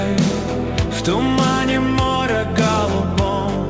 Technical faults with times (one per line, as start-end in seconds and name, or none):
none